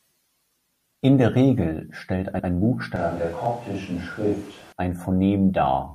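From 2.96 s to 4.72 s the speech turns roomy and hollow all at once, losing its low end, and a layer of background noise rises to roughly 20 dB below the speech, though the overall level barely changes. The return at 4.72 s is just as abrupt. This is a switch to a distant microphone: the close microphone's signal most likely dropped out, leaving a pickup further away that hears more of the room.

Within that stretch, at 3.46 s, the waveform briefly freezes flat for 0.73 ms, about 32 samples. This is an underrun with held sample: the output buffer ran dry, and the converter kept repeating its last value instead of dropping to silence. Because a fraction of a millisecond of live audio was lost rather than paused, the signal jumps when data returns.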